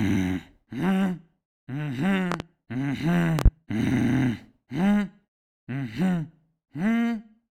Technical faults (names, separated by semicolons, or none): loud pop